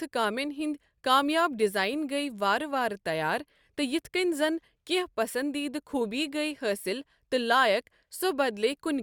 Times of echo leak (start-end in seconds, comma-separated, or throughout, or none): none